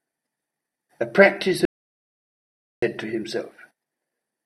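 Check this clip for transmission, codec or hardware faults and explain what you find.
There is one fault, an audio dropout to silence from 1.65 s to 2.82 s. The input signal was likely lost, through a disconnected device, a broken link or an accidental mute, while recording or encoding carried on writing silence. The speech stops abruptly mid-flow and resumes just as abruptly. For about 1.17 s the gap is dead silence with no room tone at all, and whatever was spoken in that stretch is gone.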